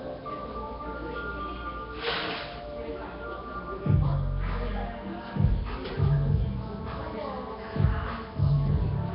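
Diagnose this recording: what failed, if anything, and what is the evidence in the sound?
The failure sits at the codec stage. A rough, hissy haze runs through the whole clip, and the sound has a smeared, underwater quality from start to finish. Nothing reaches above about 5.3 kHz. This points to Nellymoser compression, the likely cause. That codec codes short blocks with a fixed, small number of bits per sample. Weak bands get none and are refilled with noise, which produces the haze. The heavy damage fits a rate around 22 kbps.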